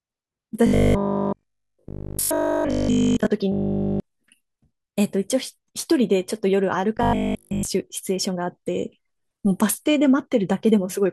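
From 0.67 to 3.27 s, 3.52 to 4.0 s and 6.97 to 7.69 s, robotic sound from repeated short buffers imposes a rigid 50 Hz buzz, likely from a 20 ms block looped while fresh audio is skipped. The first two spans are almost entirely repeats, the third mostly so.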